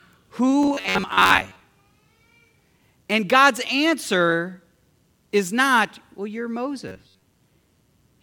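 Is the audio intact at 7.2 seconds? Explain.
No, 7.2 s sits inside a stretch of robotic sound from repeated short buffers, running 6.88 to 7.23 s. Most of it is likely a repeated chunk of about 10.7 ms standing in for late audio, which locks the speech into a stiff, metallic buzz near 94 Hz.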